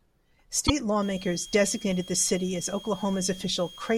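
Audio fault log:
0.64–0.70 s: damaged data in a compressed stream. Corrupted bytes in the coded speech make the decoder misread the frames, lose sync and hunt for the next valid frame header, so a brief glitch cuts across the sound.
1.02–3.97 s: switching supply whistle. A steady high whistle near 3 kHz, drifting only slightly between 3.25 and 3.26 kHz, sits about 20 dB below the speech to the end, from a switching power supply running in an audible burst mode or beating with another supply.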